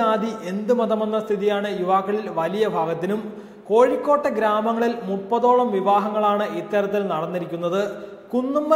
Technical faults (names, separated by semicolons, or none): none